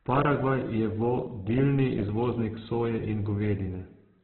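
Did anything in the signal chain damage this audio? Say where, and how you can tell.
Yes, at the codec stage. Throughout the speech there is nothing above 4.1 kHz, and what remains sounds rough and grainy, with harsh, noisy texture in place of clean tone and little watery swirl. That points to Opus compression as the likely cause, with heavy damage consistent with a bitrate near 8 kbps. At that rate the encoder narrows the bandwidth and fills starved bands with folded or noise content. MP3 would leave spectral holes that swirl, and a plain low-pass filter would be dull but clean rather than gritty.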